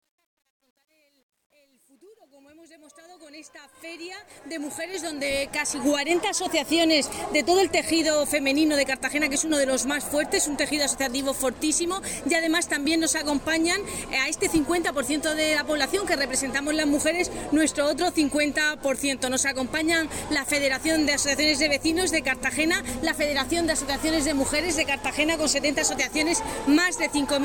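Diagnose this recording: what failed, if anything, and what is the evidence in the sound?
Truncation distortion on the fade-in, a sample-format or gain stage fault: 0.00–5.86 s turns gritty, worst to 3.95 s, consistent with undithered rounding to roughly 10 bits.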